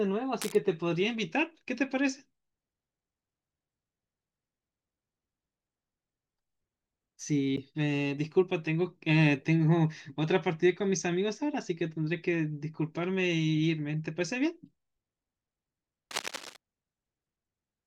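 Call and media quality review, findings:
Cable scratch noise, 0.40 to 0.55 s and 16.11 to 16.57 s. Dense, uneven rustling over the speech, roughly 10 dB below it. Likely a worn cable or connector being moved, its contact resistance fluctuating rapidly.

CD skip, 7.56 s. Tick with a mute of about 10 ms, then playback resumes from a different point. Disc player. Laser jumped to another turn of the spiral after a knock or disc flaw.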